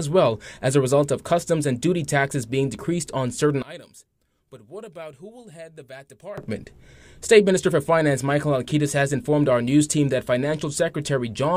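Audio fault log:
3.62–6.38 s, one channel inverted: the sound drops by about 21 dB to a faint copy, with the content shared by both channels nearly gone. Likely one stereo channel has reversed polarity, so the shared signal cancels when the channels sum to mono.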